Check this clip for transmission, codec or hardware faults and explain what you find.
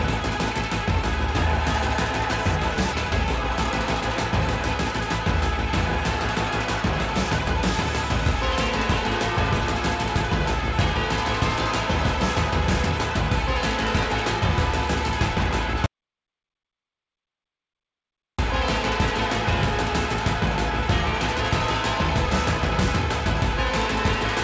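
Three faults stand out: a forward jump in the audio, a short stretch of accelerated playback right after it, and a complete dropout to silence later on. The call-codec path itself shows up as band-limiting, with nothing above 8 kHz, plus its usual coding noise, which fits wideband G.722.

Skip ahead, at 2.93 to 2.95 s: playback jumps forward with no fill at all, and roughly 0.7 s of audio is missing. A block of audio was discarded, either in transit or by the jitter buffer when it overflowed, while later audio was already queued. The receiver then spliced the two sides of the jump together almost directly. The result is an abrupt discontinuity: the sound before and after the cut are butted together, and the content in between never plays.

Jitter buffer speed-up, from 3.05 to 4.84 s: playback runs at about 104% of normal speed with the pitch unchanged. Roughly 70 ms of audio is removed in total. 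After delayed packets arrive in a burst, the buffer holds more audio than its target. To bring latency back down, the receiver trims many short pieces of one or a few pitch periods in succession.

Audio dropout to silence, from 15.86 to 18.38 s: the sound cuts out for about 2.5 s and the gap is silent, with no room tone or background left. When the audio returns it resumes mid-flow. The likely cause is that the input went missing, through a disconnected device, a failed link or an accidental mute, while the recorder or encoder kept writing silence. Everything in that window is lost.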